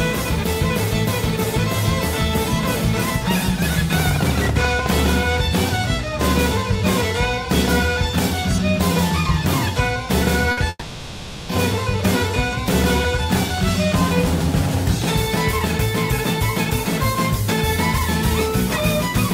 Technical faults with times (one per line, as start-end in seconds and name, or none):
4.00-4.87 train of clicks
10.51-10.59 burst of packet loss
10.69-11.51 long network dropout